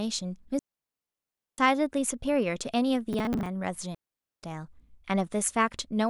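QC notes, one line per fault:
0.59–1.58 s, digital wireless dropout: the link drops and the receiver mutes for about a second, a clean near-silent hole with no noise burst either side.
3.13–3.46 s, processor overload crackle: roughly ten missed buffers of around 10 ms each replay old audio, so you get a gritty crackle riding on the speech until the load clears.
3.95–4.43 s, digital wireless dropout: same again, a mute of about 0.48 s, quick fade in and out, no hiss or splat around it.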